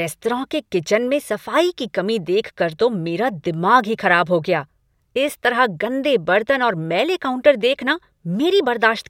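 No technical faults can be heard anywhere in the recording. The speech runs without any audible break or disturbance.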